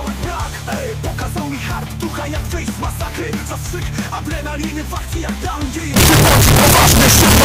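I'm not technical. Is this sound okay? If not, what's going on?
No. From about 5.96 seconds to the end, the sound turns into a very loud, harsh, buzzing distortion, and even the quiet moments blare as loudly as everything else. This is likely signed and unsigned mixed up: the 8-bit samples are read with the wrong sign convention, so every point where the waveform would gently cross its middle instead leaps from one extreme to the other.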